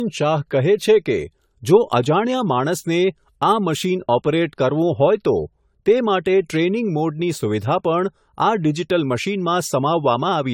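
Throughout the speech, the sound is swirly, smeared and hollow, with blurred attacks, worse than one AAC-LC pass near 96 kbit/s would give. This is generation loss, likely from about ten re-encodes, each requantising on a shifted frame grid so errors accumulate.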